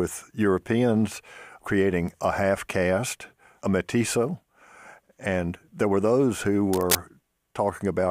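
A worn cable, connector or control was likely moved during recording of this speech clip, making its contact resistance jump around rapidly and inject uneven bursts of noise into the signal. The result is a brief episode of cable scratch noise from 6.73 to 6.96 s, roughly a quarter of a second of dense scratching and rustling laid over the speech at about the same loudness as the voice itself.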